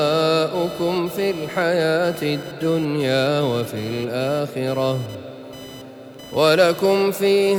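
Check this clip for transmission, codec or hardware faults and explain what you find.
One hardware fault is present: computer activity noise. It runs through the whole clip. A faint buzz sits beneath the sound, pulsing at around 1 kHz. It lies roughly 25 dB below the wanted signal. The buzz does not follow the sound. It follows the computer's workload. As the processor, graphics card or mouse draw changing current, the shared ground of the audio circuit shifts. Those shifts leak into the signal as buzzing, chirping or scratching.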